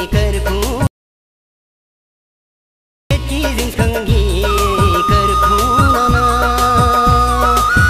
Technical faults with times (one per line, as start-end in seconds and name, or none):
0.87-3.11 audio dropout to silence